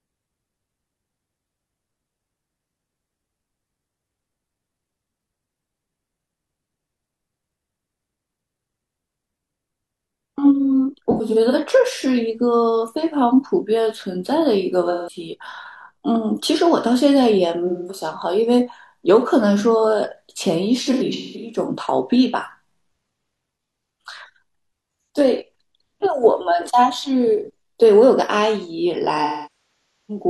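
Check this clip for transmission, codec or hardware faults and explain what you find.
The speech has AAC frame loss with concealment, five times: 11.11–11.55 s, 14.90–15.18 s, 17.67–18.04 s, 20.83–21.58 s and 29.24–30.24 s. When frames go missing, the decoder fills the gaps from the last good spectrum. The shorter gaps, about 170–210 ms, and the patchy ones at 11.1 and 20.8 s (longest runs around a tenth and a fifth of a second) come out as smeared, phasey patches. The final 0.85 s stretch decays toward silence and fades back.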